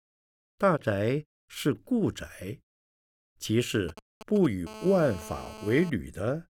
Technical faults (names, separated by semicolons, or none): GSM signalling bursts; GSM phone buzz